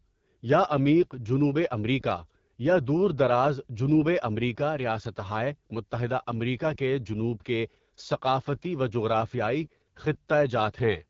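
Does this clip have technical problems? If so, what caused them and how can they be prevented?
Yes. Throughout, the speech was squeezed through an AMR wideband (HD Voice) codec at a very low rate, leaving it rough, raspy and empty above 7.4 kHz, which fits 8.85 kbit/s. Running the link at 12.65 kbit/s or higher would prevent this.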